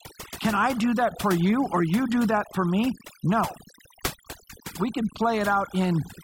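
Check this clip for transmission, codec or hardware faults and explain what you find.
One fault shows up: overdone noise removal, present throughout the speech. A noise reducer set far too aggressively is pulling individual frequency bands down whenever they sit near its noise estimate, dragging quiet speech detail along. The background drops and breaks up into twinkling specks.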